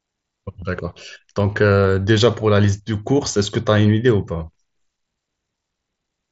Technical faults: concealed Bluetooth headset packet loss

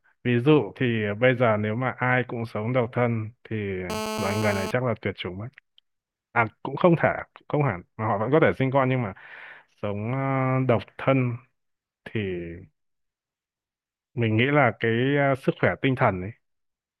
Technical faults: GSM phone buzz

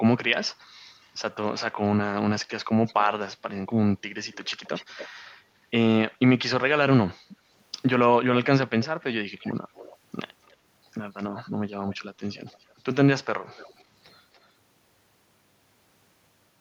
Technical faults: echo leak

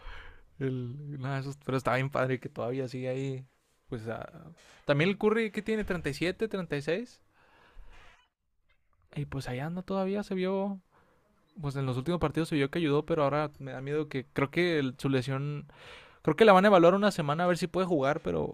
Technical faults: none

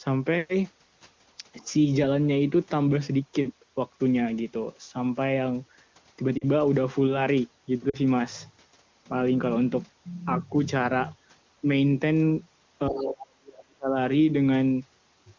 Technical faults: speech suppressed in double talk; other side's voice leaking through; lost AMR speech frames

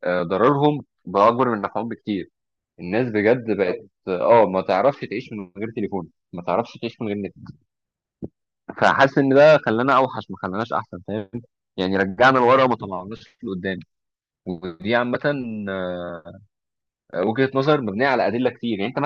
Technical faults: none

